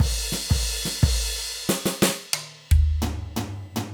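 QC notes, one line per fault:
1.38–3.90 s, USB whine: a faint fixed-pitch whine at 1 kHz, strongest at 2 kHz, well below the music. The USB bus's 1 ms frame current is leaking in through power or ground.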